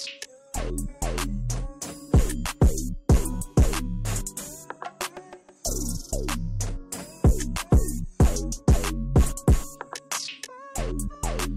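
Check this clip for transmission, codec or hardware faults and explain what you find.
Checking this clip turned up no faults.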